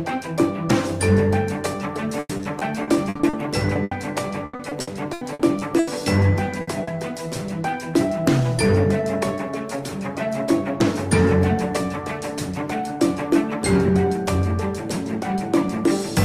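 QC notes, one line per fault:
2.19–3.35 s, repeated packet loss (robotic sound): nine gaps totalling 340 ms, the longest 100 ms, so about 29% of the stretch is patched rather than real. Each hole is filled by extending the preceding sound, and the next arrives before the audio settles, giving a choppy, mechanical texture rather than a single dropout.
3.73–3.77 s, short concealed packet loss: 20 ms went missing and was filled by continuing the last sound before blending back. It is a brief smear or wobble, much shorter than the bursts.
3.83–3.93 s, burst of packet loss: 80 ms lost in one block. The fill holds the previous sound and lets it fade, so a sustained buzz or dying hiss covers the gap and the audio picks up further on, with a piece skipped.
4.45–5.89 s, repeated packet loss (robotic sound): eight gaps totalling 440 ms, the longest 80 ms, about 31% of the span concealed. It is the same stuttering, robotic chop as the earlier stretch. 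The many closely spaced holes set it apart from one isolated burst.
6.61–6.69 s, burst of packet loss: 60 ms lost at once, heard as a held, fading continuation of the prior sound followed by a jump forward. This is one longer hole, not a chain of small ones.
6.83–6.89 s, short concealed packet loss: 40 ms filled from the preceding sound, a quick wobble or smear.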